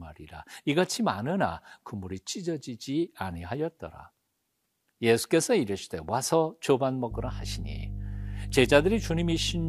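Mains hum enters at 7.11 s and continues to the end of the speech: a steady 50 Hz drone nearly as loud as the voice itself. A ground loop or nearby transformer has coupled the power line into the signal path, adding low harmonics.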